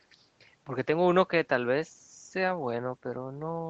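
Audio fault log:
Nothing stood out on listening to this speech, which has the narrowed range of a call, with nothing above 8 kHz.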